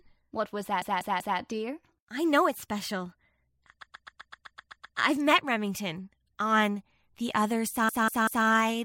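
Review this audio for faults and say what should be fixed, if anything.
Repeated frames stutter the speech at 0.82–1.39 s (a 192 ms chunk replayed three times, before "dear I know it's"), 3.82–4.98 s (128 ms replayed nine times, before "I've met") and 7.89–8.46 s (192 ms, three times). The decoder received the same compressed frames more than once. Unlike an echo, each pass is an identical copy, and it adds time instead of overlapping. Drop duplicate frames before writing or sending the stream.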